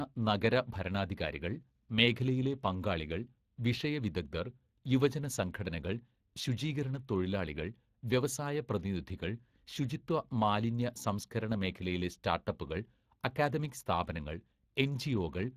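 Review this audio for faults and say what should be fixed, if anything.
Hoarse, grainy speech with a noisy edge runs throughout and is cut off above 15.3 kHz: Speex codec damage, fitting a setting near 22 kbps, where excitation is coarsely coded. To prevent it, send the speech through a modern codec such as Opus at a higher bitrate.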